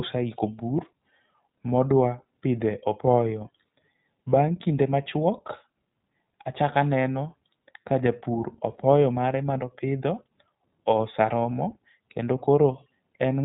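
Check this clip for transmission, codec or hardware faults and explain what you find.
One fault runs through the whole recording: the speech has been through the iLBC codec, a narrowband VoIP coder. It codes the excitation of each 20 ms frame on its own, without borrowing from the frame before, and the rough, slightly mechanical texture fits its 15.2 kbps mode. The coding damage is plainly audible from start to finish as a grainy, synthetic edge on the speech. The band also stops at 3.8 kHz, so the speech lacks air and crisp sibilants and sounds boxed-in.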